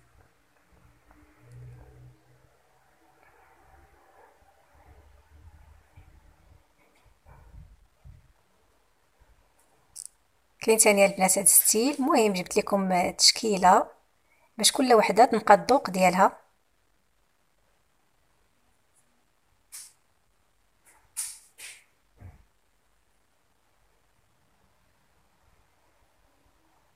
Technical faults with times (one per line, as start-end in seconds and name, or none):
none